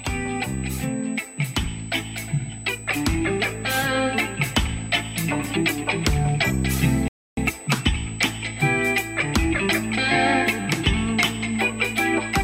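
A steady USB whine sits under the sound from start to finish, a fixed tone at 8 kHz, fairly prominent at roughly 15 dB below the signal. The bus's 125-microsecond microframe timing leaks through power or ground, drawing an unbroken horizontal line at 8 kHz on a spectrogram.

From 7.08 to 7.37 s a rebuffering stall occurs: the player exhausted its downloaded audio and halted. The sound drops to silence for about 290 ms, then continues exactly where it stopped, showing as a flat gap in the waveform.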